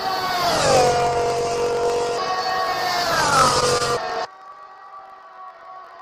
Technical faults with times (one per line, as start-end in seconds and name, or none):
0.00-6.01 block size mismatch (truncated)
3.30-3.82 repeated stalls (stutter)
4.79-5.95 jitter buffer slow-down